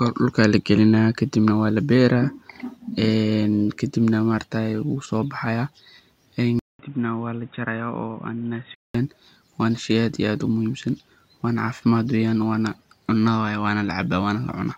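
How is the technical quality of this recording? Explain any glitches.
One glitch: from 6.59 to 8.95 s, after a 200 ms gap, the speech drops about 5 dB, loses everything above 3.8 kHz, and gains a background noise about 30 dB down. That is likely an input switched to a poorer device. A new noise floor and the gap mark a device change rather than filtering.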